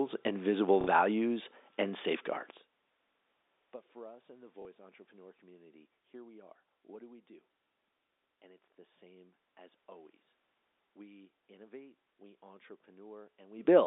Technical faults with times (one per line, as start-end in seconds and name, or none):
0.81-0.87 packet loss with last packet repeated
4.62-4.65 packet loss with last packet repeated